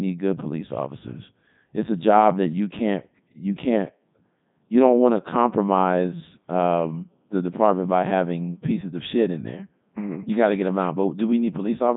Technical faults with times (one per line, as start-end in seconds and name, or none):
0.00-11.97 Codec 2 vocoder